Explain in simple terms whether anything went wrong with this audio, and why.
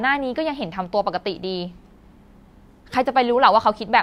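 Nothing went wrong with this speech recording that a listener would notice. No skips, breaks or sudden changes point to trouble in how it was captured, sent or played back.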